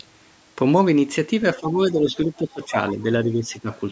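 From 1.56 to 3.06 s the speech is pulled down in uneven patches totalling about a second, with the deepest dips roughly 15 dB. This is speech suppressed in double talk, most likely an echo canceller that took the talker's voice for loudspeaker echo while both ends spoke and attenuated it. The level sags.

At 2.62 to 2.71 s, inside that stretch, a brief scrap of the other side's voice leaks through, faint at roughly 30 dB below the speech. It is probably residual loudspeaker echo that the canceller failed to subtract from the microphone signal.

From 3.24 to 3.7 s the same double-talk suppression returns. It is shallower, at roughly 10 dB, and covers about 0.4 s, again likely the canceller ducking the near-end voice. The band-limited call processing, with nothing above 8 kHz, stays in place throughout.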